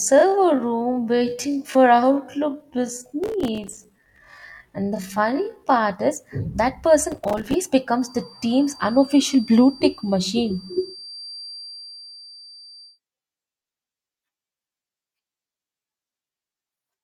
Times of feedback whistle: 7.89-13.00

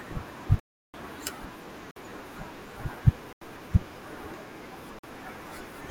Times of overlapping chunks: none

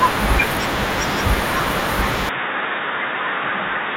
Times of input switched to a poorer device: 2.29-3.96

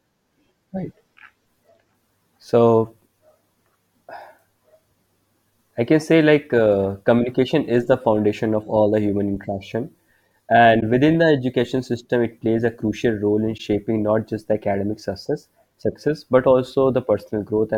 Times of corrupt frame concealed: 10.80-10.83, 13.57-13.60

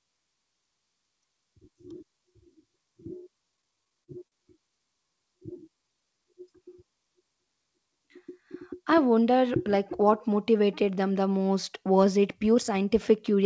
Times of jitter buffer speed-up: 8.30-9.47

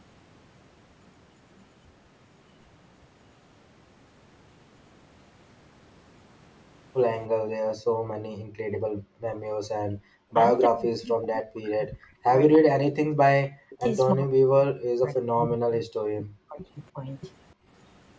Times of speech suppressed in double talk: 9.88-9.94, 10.67-13.20, 13.57-16.61, 16.93-17.04

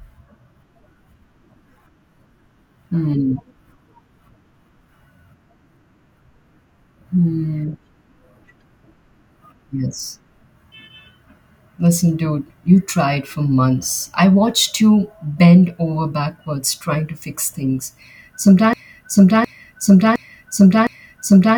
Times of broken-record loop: 18.73-21.57

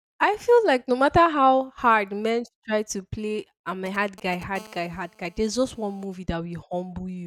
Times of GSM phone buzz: 4.56-6.05

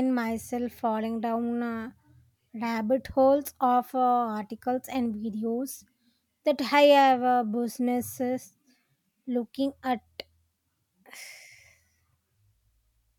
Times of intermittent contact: none

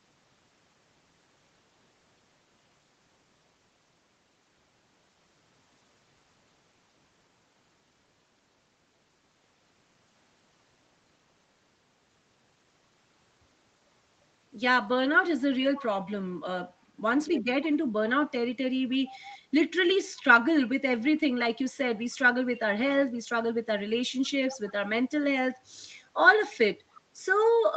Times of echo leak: 21.96-22.15, 24.50-24.72, 26.50-26.56

